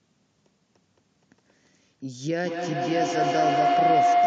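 From 2.44 s to the end, feedback howl builds around 700 Hz, pulsing roughly every 200 ms and peaking about 7 dB above the speech as the loop gains each pass.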